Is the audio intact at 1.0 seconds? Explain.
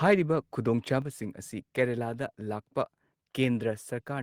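No: the microphone volume stepped down at 1.02 s, dropping speech and background by about 5 dB at once, likely call software cutting the input level.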